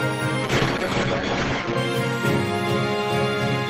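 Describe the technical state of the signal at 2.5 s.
Around 2.5 s the signal is intact, with no technical fault to be heard at that moment.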